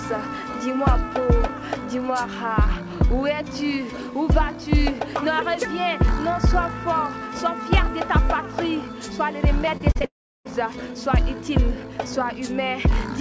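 Repeated packet loss (robotic sound) runs from 9.66 to 10.05 s. Five short holes open in the stream, the longest 32 ms, and each is patched by stretching the preceding sound, so about a quarter of that span is filler. It comes across as choppy.

A long network dropout follows from 10.05 to 10.47 s. A brief fading buzz or hiss carries on from the last sound, then about 0.34 s of silence, likely because no audio arrived for roughly 0.4 s. Sound resumes afterward with that portion missing, its band stopping at 8 kHz.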